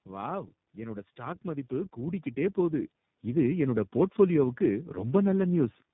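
Throughout the speech, tandem speech coding: the call passed through two low-rate speech codecs in sequence, likely AMR-NB then iLBC, bridged by G.711, each re-encoding the last one's damaged output. The compounded losses leave it rough, muffled and warbly, with nothing above 3.8 kHz.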